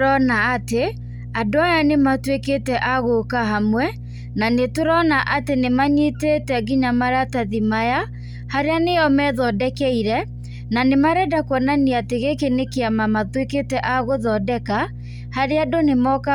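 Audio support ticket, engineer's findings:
Mains hum present throughout the speech. Steady low tone at 60 Hz with some low harmonics, sitting only about 15 dB under the signal, so clearly audible. Probable component: ground loop or nearby transformer coupling the power line into the signal path.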